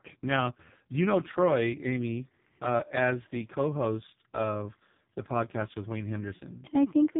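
From start to finish the speech sounds thin, buzzy and synthetic, with nothing above 3.8 kHz. This is heavy AMR narrowband mobile codec damage: the voice is rebuilt from a coarse vocal-tract model and sparse pulses, and the degradation fits AMR-NB's lowest 4.75 kbps mode.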